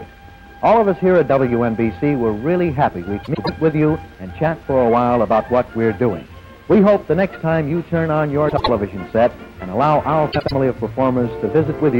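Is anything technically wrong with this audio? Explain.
Yes. Frames out of order occur at 3.23–3.49 s, 8.48–8.69 s and 10.32–10.52 s. Two neighbouring blocks play swapped: 104.5 ms each first, then 78.4 ms. Each spot sounds like a garbled flutter. Nothing goes missing.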